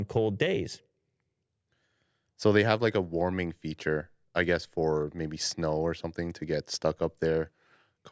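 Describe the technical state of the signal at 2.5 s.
At 2.5 s the speech signal is intact, with no dropout, clipping, glitch or other technical fault.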